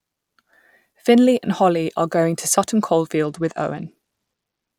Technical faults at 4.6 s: Bluetooth SBC bit pool drop

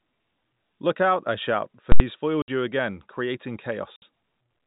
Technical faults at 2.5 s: packet loss filled with silence

